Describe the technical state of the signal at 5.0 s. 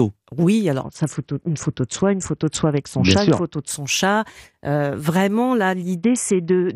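At 5.0 s the speech signal is intact, with no dropout, clipping, distortion or other technical fault audible at that point.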